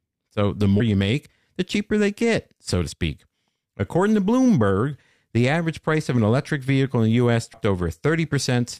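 At 0.79 s there's a quick glitch cutting into the speech, another at 2.91 s, and a third from 7.53 to 7.55 s. All three are damaged data in a compressed stream: part of the encoded file is wrong, so the decoder misreads those frames, loses its place, and hunts for the next valid frame header. Each glitch lasts only about 15 to 20 ms, so you hear a brief chirp, squawk, click or short hole.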